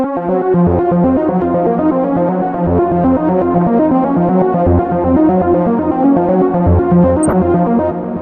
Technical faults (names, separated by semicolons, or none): DAB burbling